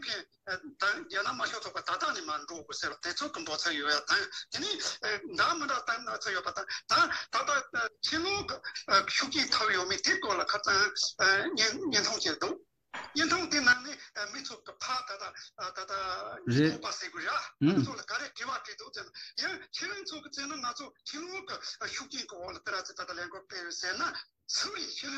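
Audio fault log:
2.92 s, 7.87 s, 12.82 s and 22.72 s: audio missing between chunks. At each point the sound jumps forward abruptly, skipping roughly a twentieth of a second. The two sides meet with no gap of silence, so the jump can land as a small click. The likely cause is a recorder or processor working in blocks of about 5 s that drops a short stretch each time it finishes one block and begins the next.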